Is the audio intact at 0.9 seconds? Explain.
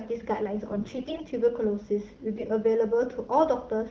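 No. From 0.69 to 1.23 s the sound suffers AMR bit errors: on a weak link, some of the less protected bits inside the AMR-WB frames arrive flipped. The decoder still accepts them, so its excitation pulses fall in wrong places and the finer pitch, gain and spectral values drift. Pitch and level roughly hold, but the sound turns hoarse, scratchy and gargly. The bit error rate is roughly one in ten. A spectrogram shows smeared, noisy harmonics across that span, with an irregular waveform envelope.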